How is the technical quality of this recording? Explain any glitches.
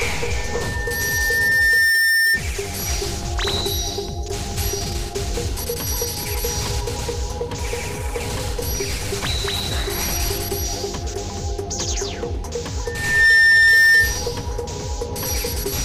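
The recording is marred by loudspeaker feedback squeal twice, from 0.36 to 2.42 s and from 12.85 to 14.20 s. Each time a steady 1.8 kHz tone swells to about 10 dB above the audio, building over roughly a second and a half the first time and under half a second the second. A microphone was re-amplifying its own loudspeaker, and the loop gain at that frequency went above one.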